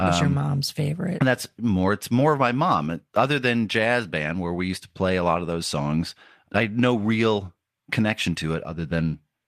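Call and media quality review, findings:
No audible faults found in the speech; nothing to flag for any component.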